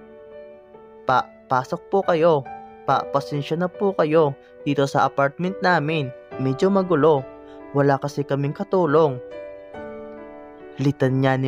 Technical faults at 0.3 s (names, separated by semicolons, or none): none